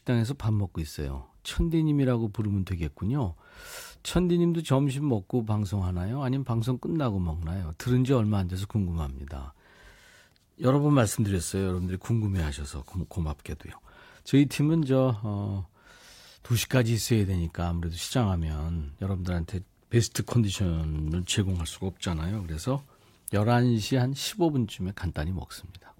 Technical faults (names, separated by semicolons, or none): wireless microphone noise hit